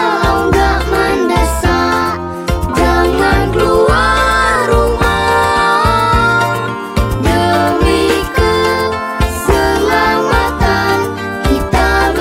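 Nothing technically wrong can be heard anywhere in the audio. No cause needs explaining, and no moment stands out for attention.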